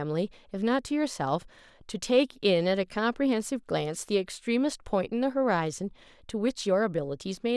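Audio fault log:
No fault is heard in this speech recording. Nothing in it calls for an entry in the log.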